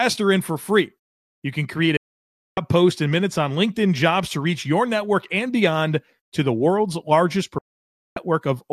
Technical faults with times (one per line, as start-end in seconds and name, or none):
1.97-2.58 digital broadcast dropout
7.58-8.17 digital broadcast dropout